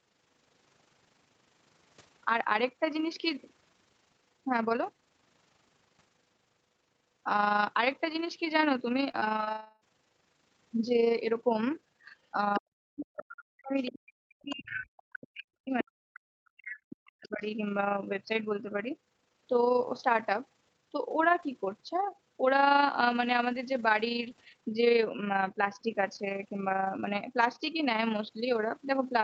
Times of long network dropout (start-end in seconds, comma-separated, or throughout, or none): 9.51-9.83